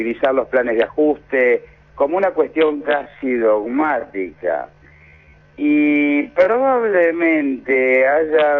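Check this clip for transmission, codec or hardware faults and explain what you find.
One processing fault is present. From 2.58 s to the end, a time-stretched section plays at 0.567 times speed, likely from software lengthening audio by repeating short pieces, leaving pitch unchanged but pace dragging.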